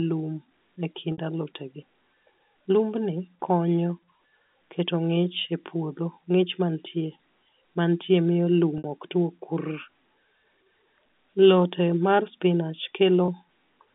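At 1.12 to 1.18 s, 8.78 to 8.84 s and 13.26 to 13.28 s, packet loss with pitch repetition bridges gaps of 60, 60 and 20 ms, which fits 20 ms packets. The receiver loops the last pitch period, so the 20 ms gap sounds like a briefly held, buzzy tone, while the two 60 ms gaps fade into silence before the speech returns with a short cross-fade. A spectrogram shows flat, evenly spaced harmonic stripes within the 200 Hz to 3.6 kHz telephone band of the G.711 line, and a waveform shows identical repeating cycles.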